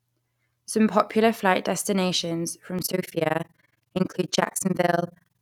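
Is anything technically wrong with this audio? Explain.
Yes, there is one fault. After "popular flight destinations", from 2.79 s to the end, overlap-add ripple appears. Mismatched frame overlaps swing the level by about 60 dB around 20 times a second, giving a harsh robotic flutter. The waveform and spectrogram show regular vertical gaps.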